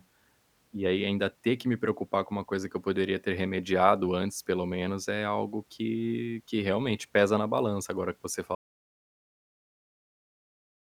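At 8.55 s the speech cuts off abruptly and the clip stays in silence through to the end, with no room tone at all. This is an audio dropout to silence, likely from the input being lost while the recorder kept writing silence.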